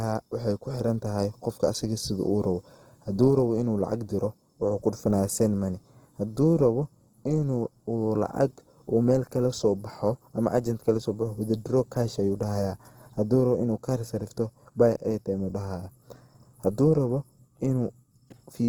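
From start to finish the speech sounds rough and grainy, with a noisy, sandy texture over the voiced sounds and a hiss filling the upper range where real detail should be. The top end stays open to about 20 kHz, so there is no muffling. The cause is likely Opus compression in its music mode at a low rate, one that fits roughly 16 kbps. That rate is too little to code every band properly, so the encoder keeps each band's energy but fills the gaps with noise or copies of lower bands, which produces the graininess.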